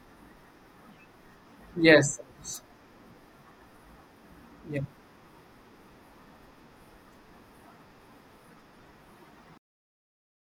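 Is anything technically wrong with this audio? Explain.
Yes, there's a cut-off end at 9.58 s: the speech stops mid-sound and drops straight to digital silence for the last second or so, with no natural decay. The final buffers never got written or played, so the tail just vanishes.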